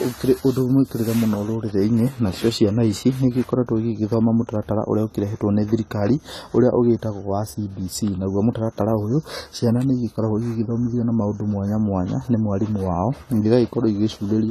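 Dull, smeared and fizzy on sibilants from start to finish, with nothing above 14 kHz: AAC compression, likely at a low bitrate around 32 kbps.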